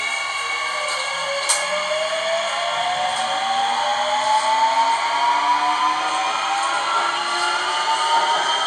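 From about 1.72 s right through to the end, there's channel delay (comb filtering). One side is running a hair behind the other, something like a fiftieth of a millisecond, which fits roughly a one-sample offset, and when the two fold down to mono the shared content cancels. With a gap that tiny, the first notch lands up around 20 kHz, so it's less a hollow phasey sound and more a gentle dulling of the very top end.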